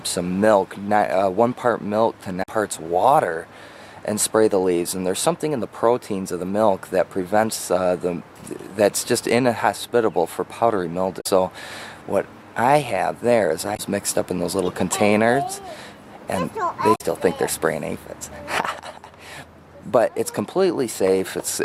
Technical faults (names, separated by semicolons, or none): damaged data in a compressed stream